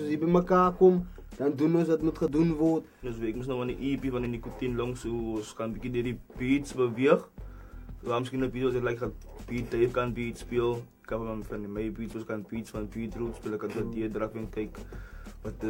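Overlap between stream segments occurs at 2.28 to 2.30 s, 4.25 to 4.28 s and 10.16 to 10.19 s. The stream is delivered in 2-second segments whose time stamps overlap at these boundaries, so the player trims material that was never actually duplicated. Roughly 20 to 30 ms of audio is lost each time, and the waveform jumps across the gap, producing a brief click or tiny skip in the sound.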